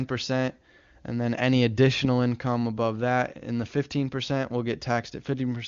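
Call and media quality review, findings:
Findings: no faults found in this call and media quality review; the speech has the expected HD Voice wideband character, with nothing above about 7.3 kHz.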